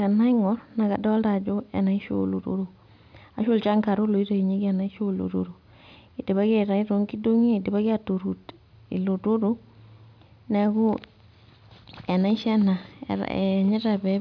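No audible technical faults.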